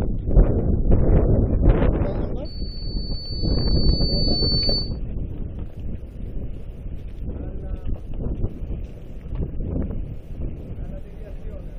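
From 2.45 to 5.0 s a loudspeaker feedback squeal at 4.5 kHz swells over about two seconds until it sits slightly above the sound. A microphone is re-amplifying its own loudspeaker output. Unlike a steady interference whistle, the tone grows by itself.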